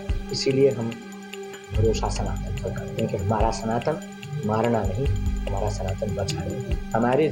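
No technical faults are audible.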